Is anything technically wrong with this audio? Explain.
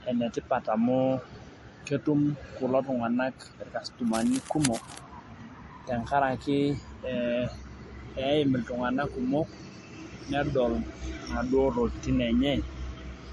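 Yes, there are two faults.

Throughout the speech, there are two different kinds of artefact layered on top of each other, and nothing is present above about 11.4 kHz. This is likely transcoding between lossy codecs: the character points to a low-bitrate MP3 encode, around 48 kbit/s, re-encoded as Vorbis at a similar rate. The Vorbis stage wasted bits reproducing the MP3 damage and added its own artefacts, while the lowest band limit in the chain stayed in place.

From 4.07 to 5.00 s, a burst of harsh, irregular scratching and rustling sits over the speech, roughly 10 dB below it. The likely cause is cable scratch noise: a worn cable, connector or control being moved, so that its contact resistance fluctuates quickly and injects dense, uneven noise into the signal for as long as the movement lasts.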